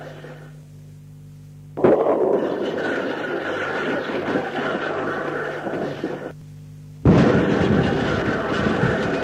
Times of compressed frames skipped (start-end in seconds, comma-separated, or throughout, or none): 2.79-2.85